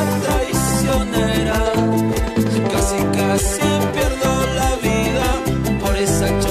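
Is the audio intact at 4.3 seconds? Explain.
No. At 4.25 s there is an overlap between stream segments: two segments, which fit a 2-second segment length, claim the same stretch of time, and the player trims about 13 ms that was never duplicated. The waveform jumps, heard as a brief click or skip.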